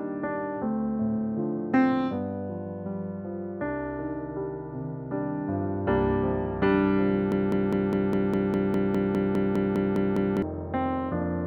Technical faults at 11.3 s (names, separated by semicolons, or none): none